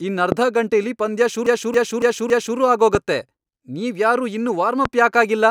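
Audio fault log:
0.32–0.34 s, 2.95–2.97 s, 4.85–4.88 s: loud pop. A single sharp pop about 15 dB above the speech sits on top of each point; the first comes just before "ಗಂಟೆಲಿ ಪಂದ್ಯ". The likely cause is a brief voltage step from a switch, static or driver glitch, while the speech continues beneath it.
1.47–2.58 s: repeated frames. Just after "ಗಂಟೆಲಿ ಪಂದ್ಯ", a 278.6 ms stretch is played four extra times, producing a stutter. The block length fits a run of three compressed frames resent, and the repeats lengthen the audio by about 1.1 s.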